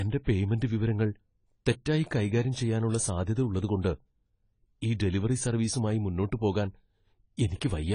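Speech throughout, sounding dull and smeared with nothing above 10 kHz and a warbly fizz, likely AAC compression at a low bitrate, something like 24 kbps.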